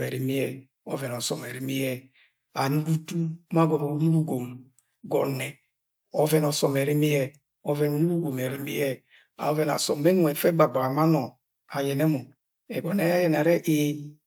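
No technical faults can be heard anywhere in the recording.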